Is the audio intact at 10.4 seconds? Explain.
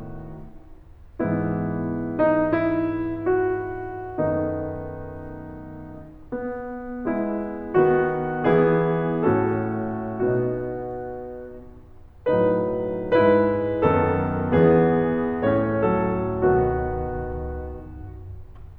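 Yes, the music plays through 10.4 seconds with no dropout, click, glitch or other audible fault at that moment.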